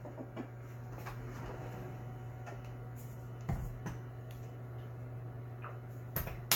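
From start to finish the sound has a swirly, smeared and hollow quality, with transients softened and blurred, and nothing is present above 17 kHz. This is generation loss, most likely from the audio being run through a lossy codec about seven times, in a way that fits AAC-LC at around 96 kbit/s. Each re-encode quantises again on a shifted frame grid, so noise and spectral gaps compound beyond what that bitrate alone would produce.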